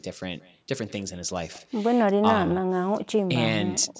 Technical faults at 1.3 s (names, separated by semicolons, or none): echo with no canceller